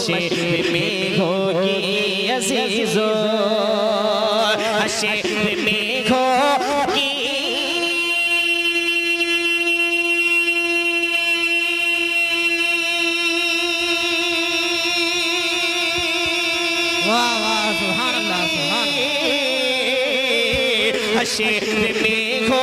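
Nothing in the audio stood out as a technical problem on listening.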